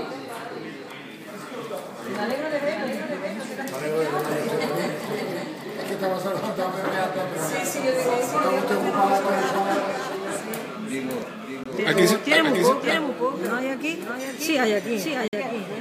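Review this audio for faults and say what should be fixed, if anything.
A doubled audio track runs through the whole clip. A second full-band copy of the sound trails the original by about half a second and sits a few dB quieter. The likely cause is the same source being captured again through a slower path. Unlike room echo or a delay effect, the copy carries no decay, no room colour and no repeats. It is one clean duplicate at a fixed offset. To prevent it, route the source through a single capture path and mute any monitoring or loopback feed.

Two Bluetooth stalls break the sound. The first runs from 11.64 to 11.66 s, with 21 ms of silence. The second runs from 15.28 to 15.33 s, with 51 ms of silence. Each is a hard cut to silence, after which the sound resumes. That points to the headphone buffer running dry while packets were likely held up by radio interference. A codec dropout would instead leave smeared or warbling fill in the gap. 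To prevent it, keep the phone close with a clear line of sight, away from busy 2.4 GHz devices.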